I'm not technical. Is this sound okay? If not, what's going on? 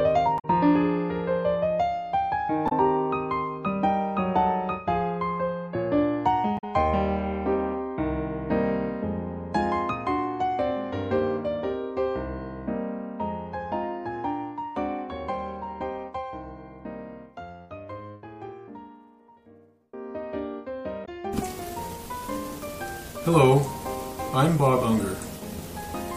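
No. There are brief chirps or squawks at about 0.35 to 0.45, 2.65 to 2.72, 6.55 to 6.64 and 21.02 to 21.09 seconds. This is damaged data in a compressed stream: some of the file's stored data is garbled, so the player misreads those moments and briefly loses its place.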